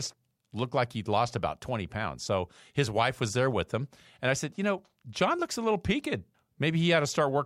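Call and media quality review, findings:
No audible faults in the speech signal: level, continuity and timing hold steady throughout, with no symptom to trace to any component.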